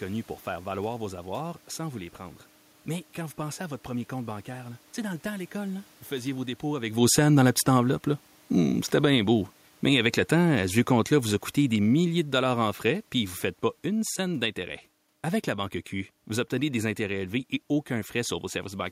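The automatic gain control in this speech recording finds the input too loud or its background noise too strong for its starting gain and lowers its gain gradually from 7.0 to 14.48 s, right after "faisiez vos dépôts avec", by about 10 dB in total. The voice and the room noise sink together, unlike the talker's own movement around 7 s.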